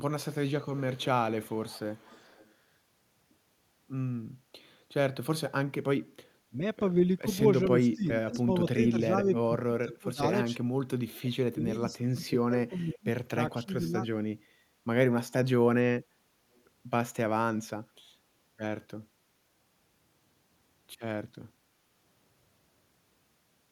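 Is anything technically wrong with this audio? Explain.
Yes. This speech has two faults. Both point to a loudspeaker echo canceller.

Echo leak runs from 0.31 to 2.55 s, with short bursts at 7.9 to 8.38 s, 9.35 to 9.39 s, 9.92 to 9.96 s and 16.54 to 16.61 s. A copy of the voice returns about 0.41 s late. It is most audible around 9.35 s and barely there at 16.54 s. The canceller likely missed part of the loudspeaker pickup.

Speech suppressed in double talk hits at 6.48 to 6.6 s, 7.24 to 10.57 s and 11.13 to 13.94 s. The voice dips sharply, by up to about 25 to 30 dB, in scattered pieces. The longer spans lose a second or two in total. It is likely the canceller ducking while both sides spoke.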